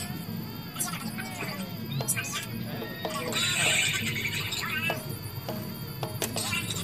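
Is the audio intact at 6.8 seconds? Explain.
Yes, the audio is intact at 6.8 seconds, with no audible fault at that moment.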